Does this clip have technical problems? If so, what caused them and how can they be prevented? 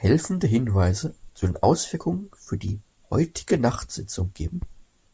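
No, the signal shows no technical faults, so there is no cause to trace and nothing to prevent.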